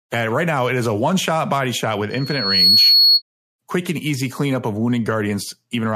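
Just after "body shot with", from 2.10 to 3.22 s, a piercing 4.4 kHz tone swells over roughly half a second to sit around 10 dB above the speech, then stops before "quick and easy cleanup". This is loudspeaker feedback squeal: the microphone re-amplified its own loudspeaker at that frequency.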